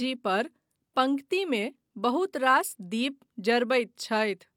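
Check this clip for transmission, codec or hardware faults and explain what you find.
No faults turn up anywhere in this clip.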